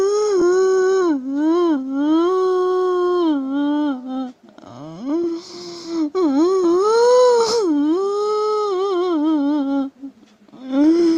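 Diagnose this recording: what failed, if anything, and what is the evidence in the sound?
At the network and jitter buffer stage, a stretch of audio was discarded while later audio was already queued, causing a skip ahead at 0.41 to 0.43 s. Roughly 0.4 s of sound is missing, with no fill, so the two sides of the jump butt together almost directly.

The same buffer then ran a jitter buffer speed-up from 0.51 to 2.38 s, repeatedly cutting out short pitch-period slices to shed excess delay. Playback runs at 112% speed with unchanged pitch and sounds hurried, with about a fifth of a second trimmed away.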